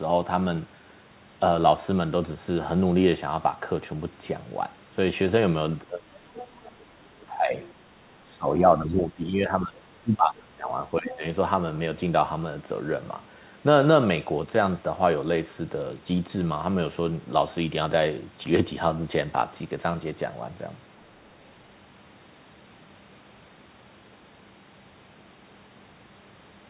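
From 5.83 to 7.58 s the speech sinks and breaks into fragments, dropping by roughly 25 dB at its lowest. This is speech suppressed in double talk. Both ends were likely talking at once, and the echo canceller, unable to tell the near talker from the loudspeaker return, pulled everything down. The same dipping recurs at 8.22 to 9.8 s (about 20 dB), 10.02 to 10.72 s (the deepest, about 30 dB), and briefly at 11.0 to 11.24 s (a shallow dip of about 10 dB).

Within and around those dips, faint scraps of a second voice slip in at 6.37 to 6.47 s and 11.09 to 11.17 s, around 15 dB under the speech, and at 7.62 to 7.66 s, quieter still at roughly 25 dB down. This is the other side's voice leaking through, likely loudspeaker sound the echo canceller failed to strip from the microphone. The whole clip is band-limited at 4 kHz by the telephone-grade call codec.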